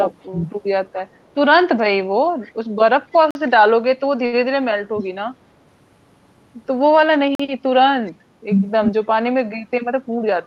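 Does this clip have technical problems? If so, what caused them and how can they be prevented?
Yes. Echo leak appears at 0.21–0.27 s, 2.44–2.53 s and 8.07–8.11 s: faint scraps of speech return about 276 ms late, roughly 30 to 40 dB below the talker. This is likely the far end's loudspeaker sound reaching its microphone and slipping past the echo canceller. Headsets or a better-tuned canceller at that end would prevent it.

Speech suppressed in double talk occurs at 2.96–3.02 s and 4.93–5.03 s, where the speech briefly drops by around 20 to 25 dB. This is likely an echo canceller that could not separate a live talker from echo while both sides spoke, so it turned everything down. Better double-talk detection, or headsets that remove the echo problem at its source, would prevent it.

Gap between chunks shows at 3.31–3.35 s and 7.35–7.40 s: 44 ms holes that recur on a 4 s cycle, where audio handled in 4-second blocks was rejoined with silence in between. 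Trimming the codec padding and scheduling each chunk back-to-back would prevent it.

A short stall from a late packet at 4.26–4.35 s holds one sound for an extra 66 ms while the receiver waited for missing data, then resumes with nothing lost. A larger or more adaptive jitter buffer, or a steadier network, would prevent it.

Jitter buffer speed-up runs from 9.75 to 10.29 s. The speech plays at about 111% speed with unchanged pitch while around 70 ms of excess buffered audio is cut away in small pieces, so it sounds hurried. Smoother network delivery, or gentler buffer-reduction settings, would prevent it.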